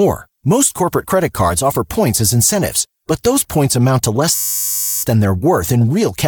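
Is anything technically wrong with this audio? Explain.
Yes. There is a system hang loop from 4.35 to 5.03 s, right after "points amount to less". The system stalled while the sound hardware kept replaying one ring buffer. That buffer holds only 10 ms of speech, which points to a very short buffer. It cycles 68 times at 100 Hz, so it sounds like a steady buzz, not a stutter. Then the speech resumes, with little or nothing missing.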